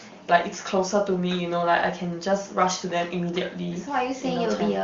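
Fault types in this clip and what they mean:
Nothing stood out on listening to this speech clip, which carries the wideband HD Voice coding of a high-rate AMR-WB call.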